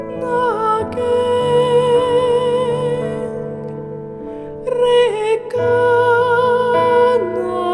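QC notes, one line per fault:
No faults found. Nothing in the audio calls for a QC entry.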